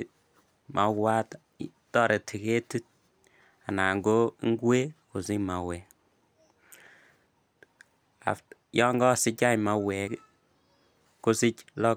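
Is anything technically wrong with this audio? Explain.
Yes. At 7.74 s, 10.08 s and 11.06 s the speech jumps abruptly, most likely a dropped buffer (overrun) each time. A block of incoming samples was overwritten before the recording software read it, so roughly 20 ms of audio vanishes and the surrounding material is spliced straight together. No gap of silence appears. Instead each point gives a small skip forward in the speech.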